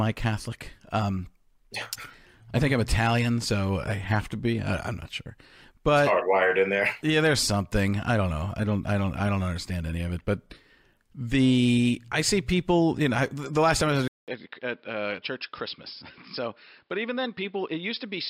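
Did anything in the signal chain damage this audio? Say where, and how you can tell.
Yes. From 14.08 s, after a 200 ms gap, the speech turns dull, quieter and band-limited to 5.3 kHz: the input likely switched to a poorer device.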